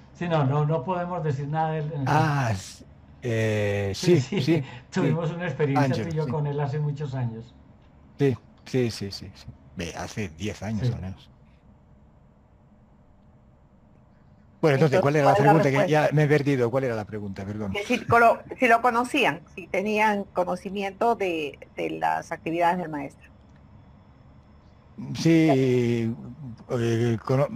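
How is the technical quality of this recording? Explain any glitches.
Nothing stood out as a technical problem on listening, and there are no glitches to explain.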